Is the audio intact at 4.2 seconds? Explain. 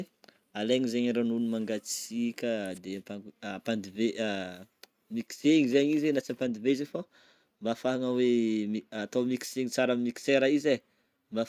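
Yes, the audio is intact at 4.2 seconds, with no dropout, click, distortion or other fault at that point.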